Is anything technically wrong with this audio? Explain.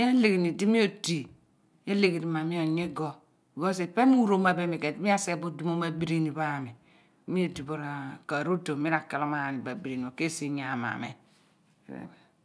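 No, nothing is technically wrong with this audio.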